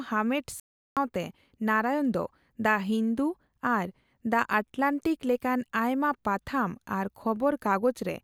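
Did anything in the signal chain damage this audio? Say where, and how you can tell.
Yes. At the playback stage, the speech goes silent from 0.60 to 0.97 s, a 369 ms playback stall, likely from the player starving or blocking. Its length sets it apart from a brief dropout.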